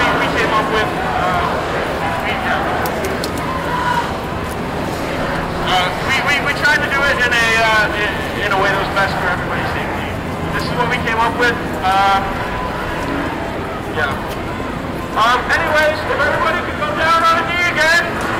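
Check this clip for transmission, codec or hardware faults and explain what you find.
One fault runs through the whole clip: hard clipping. A stage in the chain was driven about 12 dB past what it could pass, so roughly one sample in twenty hits the ceiling and is cut flat. Those squared-off peaks add high harmonics, giving the loud peaks a harsh, distorted edge.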